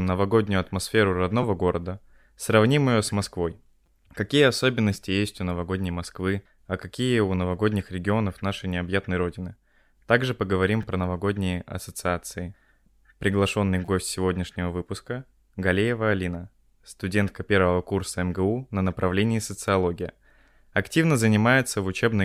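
Short buzzy clicks cut into the speech at 1.43 s, 3.86 s, 10.83 s and 13.86 to 13.88 s, the last the longest. Each is a repeated buffer: new audio arrived late, so a 5.8 ms chunk, which fits a 256-sample buffer, played two to four extra times with hard joins.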